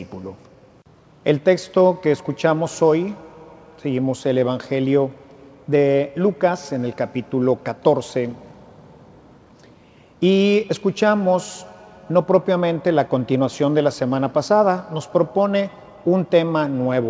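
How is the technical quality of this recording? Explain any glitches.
No glitches to speak of here; it sounds like an ordinary wideband call, with the sound topping out around 8 kHz the way a G.722-style call path would leave it, and nothing jumping out beyond that.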